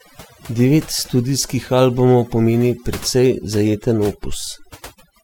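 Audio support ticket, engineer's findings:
Overdone noise removal, throughout. Background dropped, breaking up into twinkling specks. Noise suppressor set too strong, gating bands near its noise estimate, quiet speech detail lost.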